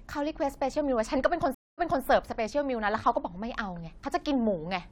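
A speech clip that drops out at 1.54 s for 0.23 s, then resumes about 0.26 s earlier, repeating a fragment. This is a stream reconnect, where a fresh decoder restarts mid-stream after the connection breaks.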